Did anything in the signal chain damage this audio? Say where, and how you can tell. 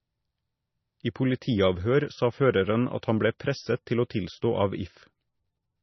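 Yes. At the codec stage, the whole clip loses everything above 6 kHz and shows heavy watery, swirling artefacts as weak spectral detail flickers between frames. That points to low-bitrate MP3 compression, likely around 25 kbps, where the encoder drops treble and starves quiet components.

At 3.39 s, between "føreren at han ble" and "presset til å tilstå", a brief hiss of about 13 ms leads into the attack, and the onset sounds smeared. This is pre-echo: quantisation noise spread across the transform block bleeds ahead of the sharp transient.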